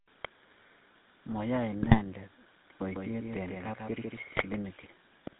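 The clip is speech, and the GSM full-rate codec runs through all of it. Everything above 4 kHz is gone. The voice is buzzy and gravelly because the codec rebuilds it from a vocal-tract model driven by a sparse, regularly spaced pulse excitation. That sound fits the 13 kbps GSM full-rate codec. GSM bit errors break the sound up twice, from 1.82 to 2.00 s and from 4.35 to 4.45 s. Corrupted filter, pitch and gain values reach the decoder. Frames come out with a bent spectrum or a sudden jump in level, which gives brief squawks and gargling. A doubled audio track runs from 2.73 to 4.55 s. A full-band copy follows roughly 150 ms behind, about 5 dB quieter, with no decay or room colour. It starts and stops abruptly. The cause is likely a second, slower capture path mixed in with the first.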